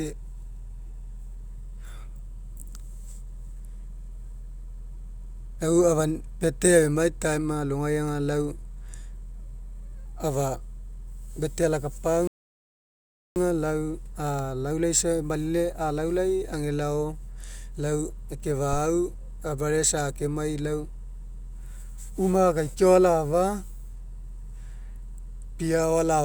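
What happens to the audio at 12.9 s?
At 12.9 s you're in the middle of a rebuffering stall running from 12.27 to 13.36 s. The player drained its downloaded audio and paused, so the speech drops to silence, then picks up exactly where it stopped. Nothing's skipped, but about 1.09 s of dead air gets added.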